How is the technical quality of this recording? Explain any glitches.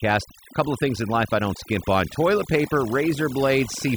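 The quality is held back by overdone noise removal across the whole speech clip. A noise reducer was pushed too hard. It pulled individual frequency bands far down whenever they sat near its noise estimate. Quiet speech detail went too. The background drops and breaks up into twinkling specks.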